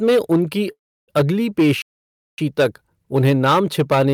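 Speech, with hard clipping throughout: the signal is driven about 10 dB past what the stage can pass, so roughly 7 percent of samples are cut flat, adding high harmonics. A call audio freeze runs from 0.71 to 1.10 s, just after "में उनकी": the last sound is stretched into a fading buzz or hiss that decays to near silence for about 320 ms, then speech resumes where it stopped, inserting roughly 365 ms of delay with nothing lost, likely from a jitter buffer that ran empty while packets were held up. A playback stall follows from 1.82 to 2.38 s, between "में उनकी अगली" and "तक उन्हें नाम". The output drops to silence for about 560 ms mid-flow and then continues, likely the result of the player running out of data or its thread being blocked.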